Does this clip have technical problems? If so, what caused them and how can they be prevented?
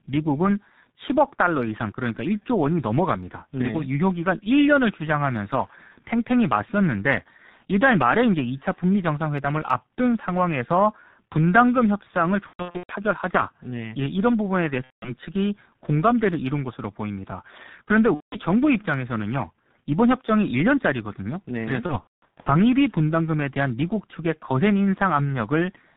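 Yes. Throughout, the speech is muffled and hoarse, with nothing above 4 kHz and consonants smeared together. This is G.723.1 codec damage, and it is heavy here, which fits a G.723.1 stream at about 6.3 kbit/s. At that rate, 30 ms frames carry a slowly updated vocal model that cannot follow fast articulation, so crisp transitions blur. A wideband codec such as Opus or G.722 at a higher bitrate would prevent it.

Four times, the voice turns into a buzzy, fading tone or coloured noise and stays weak for a moment afterwards. This happens from 12.47 to 12.93 s, where about 330 ms is lost across a 420 ms stretch with the longest gap 120 ms, and from 14.84 to 15.12 s and 18.14 to 18.38 s, about 180 ms each. It happens again from 21.86 to 22.52 s, where 360 ms is lost across 600 ms with the longest gap 210 ms. This is VoIP packet loss concealed by the speech codec. The decoder keeps repeating its last pitch and filter at falling gain, and because each frame builds on the last, it needs time to recover once packets return. 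A jitter buffer, forward error correction or a more reliable network path would prevent it.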